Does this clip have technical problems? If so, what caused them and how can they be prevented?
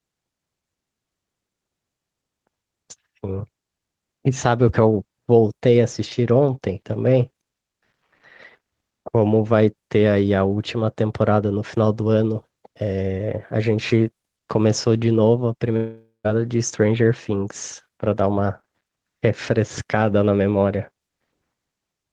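Yes. At 2.56 s a small skip in the speech points to a dropped buffer (overrun), likely caused by the input being read too late, so roughly 10 ms was overwritten and the two sides were joined. The waveform shows a sharp step, and the spectrogram a thin vertical line. Servicing the input on a higher-priority thread with a larger buffer prevents this.

From 15.76 to 16.26 s there is a long network dropout, likely caused by packets failing to arrive. The receiver continued the last sound as a fading buzz or hiss, then about 0.13 s of near-silence followed before speech resumed past the lost half-second. A spectrogram shows smeared, fading bands and then a blank column. A more stable connection, plus forward error correction and a deeper jitter buffer, helps prevent it.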